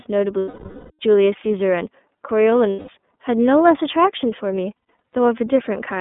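Speech passed through the iLBC codec, cut to a 200 Hz to 3.6 kHz band with a slightly rough, synthetic texture. A spectrogram shows nothing above 3.6 kHz, and the 30 ms framing fits the 13.33 kbps mode. Lost iLBC frames at 0.40 to 0.91 s, 2.70 to 2.89 s and 4.78 to 5.13 s (the last broken into short gaps up to about a tenth of a second) become held, buzzy vowels as the decoder repeats the last pitch cycle with noise. They appear as flat, repeated harmonic stripes, and the waveform shows repeated, noisy cycles that fade over the longer loss.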